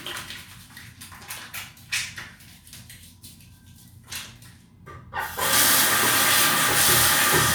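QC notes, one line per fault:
No faults found, so there is no fault line to list in these QC notes.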